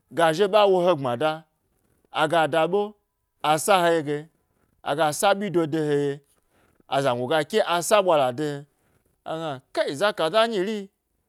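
Nothing stood out as a technical fault on listening to this speech recording.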